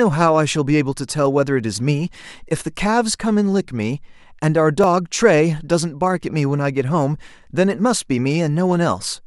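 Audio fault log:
2.50 s, repeated buffer: a 5.8 ms piece of the speech plays twice with a hard join, heard as a brief click, consistent with a 256-sample buffer repeating when new audio arrived late.
4.84 s, repeated buffer: the same fault recurs, a 5.8 ms piece played one extra time and butted against itself, giving a short click, with essentially no audio lost.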